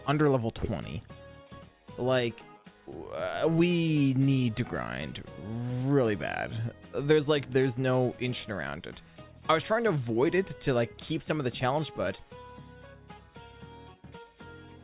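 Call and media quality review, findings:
No faults found in the review. Nothing here needs a ticket entry.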